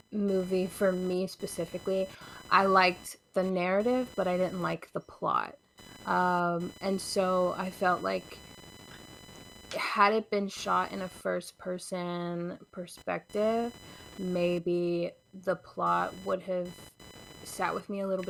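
A speech recording carries computer activity noise from start to finish. A buzzy, chirping whine near 1 kHz sits roughly 25 dB below the speech. It shifts with the computer's workload, not with the talking. Processor or graphics load is disturbing the audio circuit's shared ground.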